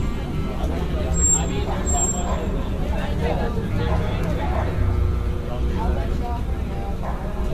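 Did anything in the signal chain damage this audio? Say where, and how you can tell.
Yes, at the codec stage, throughout. The sound is swirly, smeared and hollow, attacks are blurred, and nothing survives above 14 kHz. This is likely generation loss from around five successive AAC-LC encodes near 64 kbit/s. Each pass requantises on a shifted frame grid, compounding noise and spectral holes.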